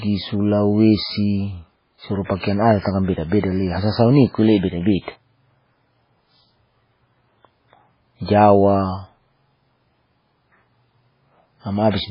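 Throughout the clip, likely heavy MP3 compression at a very low bitrate (consistent with about 16 kbps) leaves nothing above 5.2 kHz and a watery, swirling texture, unlike plain low-pass dulling. Pre-echo appears at 2.24–2.30 s, at 3.40–3.43 s just before "le hasa sau", and at 4.57–4.63 s before "beda beda". It is a 33–59 ms hiss ahead of each attack, where codec noise spread backward. It differs from a click or dropout because it builds into the onset.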